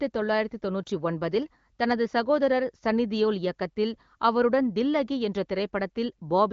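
Nothing goes wrong in this speech clip: it comes through the AMR wideband (HD Voice) codec at 18.25 kbit/s, which fits the way the sound stops at about 6.9 kHz.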